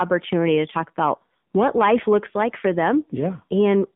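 Speech carried through an AMR narrowband mobile codec for its full length, band-limited to roughly 150 Hz to 3.6 kHz. Its pulse-driven vocal-tract model leaves a plainly buzzy, synthetic quality, which fits a low AMR-NB mode near 7.4 kbps.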